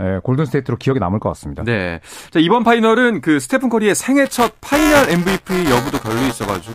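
De-emphasis applied wrongly, 0.0 to 2.53 s: an unneeded treble cut slopes the response down about 8 dB at 10 kHz, leaving the speech dull and muffled. Buffer tearing, 4.25 to 6.75 s: writer and reader collide each period, splicing in roughly a tenth of audio from about 10 ms earlier. The result is a 345 Hz robotic buzz, which fits a 128-sample buffer.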